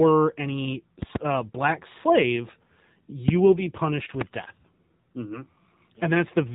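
The whole recording carries the sound of the AMR narrowband mobile codec. The speech is band-limited to 4 kHz, so it sounds thin and boxed in. The vocal tract model is working with very few bits. That leaves the voice plainly buzzy and synthetic, which fits a low AMR-NB rate of about 7.4 kbps. Consonants lose their edge.

At 1.02 to 1.18 s, two loud pops land in quick succession. They peak at roughly 20 dB above the speech. A sudden voltage step, likely from a plug, switch or static discharge, has been added to the signal. The speech carries on underneath without a break.

At 3.28 to 3.31 s, a single loud pop strikes. It is again about 20 dB over the speech. The cause is likely another sudden electrical pulse. The speech continues through it.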